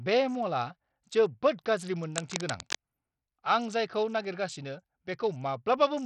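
From the start, the speech has a gritty, grainy edge, with treble that thins out and flickers, likely Bluetooth SBC compression squeezed hard. The heavy damage fits a low bitrate around 64 kbps, where the top sub-bands starve for bits and the rest get coarsely quantised.

Then from 2.16 to 2.86 s there's a burst of dense, uneven scratching and rustling sitting not far below the speech. That's cable scratch noise, likely a worn lead or connector being moved so its contact resistance jumps around.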